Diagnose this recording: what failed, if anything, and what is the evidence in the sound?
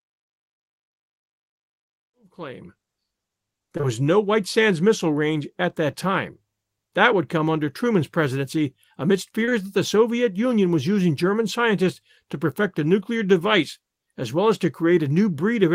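Network side: short concealed packet loss at 3.77–3.85 s before "was no" and at 9.45–9.53 s after "presidency amidst". The decoder papered over each 40 ms gap with continued sound, so you get brief smears.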